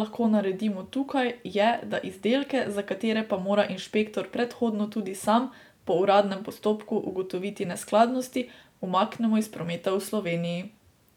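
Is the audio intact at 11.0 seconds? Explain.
Yes, the audio is intact at 11.0 seconds, with no fault at that moment.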